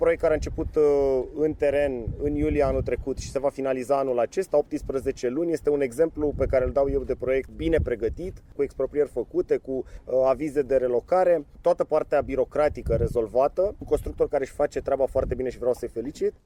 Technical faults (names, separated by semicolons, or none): none